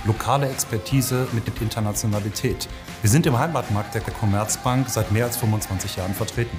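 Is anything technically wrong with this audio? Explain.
Yes, there's an overlapping chunks fault, showing up twice: at about 1.48 to 1.58 s and again at 4.08 to 4.18 s. The audio seems to have been handled in 2.5 s chunks, with each new chunk starting before the previous one finished. At each of those joins, 100 ms of sound plays twice, so you get a click or a stutter right there, repeating on that same chunk rhythm.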